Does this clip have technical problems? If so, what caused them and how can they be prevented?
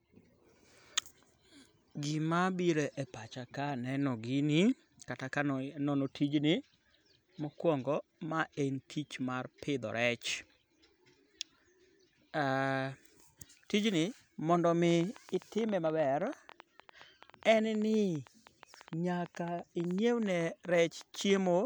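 Yes. From 14.9 s to 21.47 s a train of clicks runs over the speech: roughly seventy similar pops at about 10.4 per second, unevenly spaced, peaking around the level of the voice and audible in pauses too. The likely cause is interference from nearby equipment or a faulty connection or power supply. A spectrogram shows thin broadband vertical lines; the waveform shows sharp isolated spikes. Prevent it by moving interfering devices away, using shielded cables, and fixing interface dropouts.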